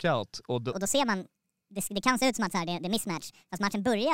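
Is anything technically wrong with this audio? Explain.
Yes, there's a wrong sample rate problem. From about 0.72 s to the end, the speech comes out roughly 1.5 times too fast and about 7 semitones too high, so it sounds chipmunk-ish and rushed. The samples are being clocked out faster than they were captured, with no rate conversion, so speed and pitch jump together by the same ratio. That 1.5 ratio fits 32 kHz audio being played back at 48 kHz.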